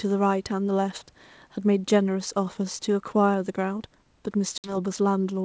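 Speech, with packet loss on an ADPCM call at 4.58–4.77 s: a hard-edged 60 ms silence, likely a few lost packets, then mistracking of the decoder's predictor and step size that distorts the return, unlike a clean dropout.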